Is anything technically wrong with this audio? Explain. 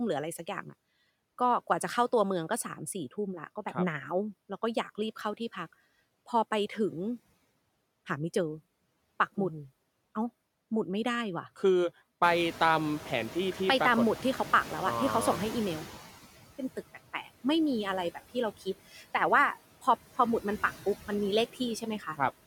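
Yes. Noise suppressor artifacts run through the whole clip. The suppressor cuts steady noise by about 16 dB frame by frame, so the noise sinks between the words and rises under them.

The noise suppressor is catching up from 12.22 to 15.98 s. Room noise jumps by about 18 dB near 12 s. The estimate lags for 3.76 s, cutting only about 9 dB until it adapts.

Speech is cut by the noise suppressor at 16.94 to 17.45 s, 18.91 to 19.03 s and 21.99 to 22.2 s. Each time, about a tenth of a second of speech (about 0.15 s in the last) is mistaken for noise and drops by about 10 to 11 dB, sounding swallowed.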